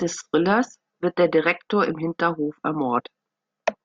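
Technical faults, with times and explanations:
2.99 to 3.01 s, damaged data in a compressed stream: a brief glitch in the speech, as corrupted bytes made the decoder misread frames and lose sync.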